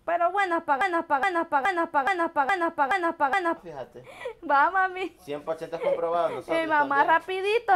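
From 0.81 s to 3.57 s, a broken-record loop repeats a 420 ms fragment seven times. The likely cause is a stalled player or stream resending its last buffer.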